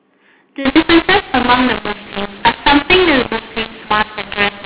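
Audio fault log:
0.65–4.66 s, mu-law and A-law mixed up: speech turns harsh and gritty and pauses fill with hiss, because A-law telephone bytes are decoded as mu-law, scrambling levels and lifting near-silent samples.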